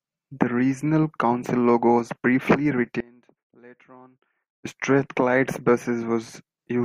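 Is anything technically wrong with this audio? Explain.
Yes. After "logo was briefly", an audio dropout to a faint residue runs from 3.00 to 4.65 s. The speech likely vanished while the path stayed live, leaving only faint sound, roughly 25 dB down.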